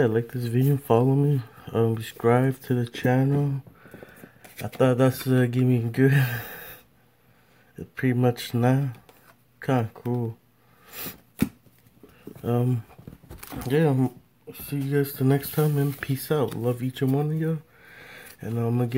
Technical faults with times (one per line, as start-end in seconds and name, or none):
none